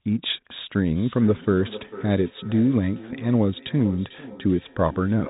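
From 0.91 s to the end, two devices on the same call share a room, and one plays back what the other's microphone sent. That microphone picks it up again, and neither echo canceller removes sound played by the other device. The result is feedback echo between two devices: each stretch of speech returns roughly 0.4 s later, thinner and more ringing, peaking about 17 dB below the speech, all within the telephone band below 4 kHz.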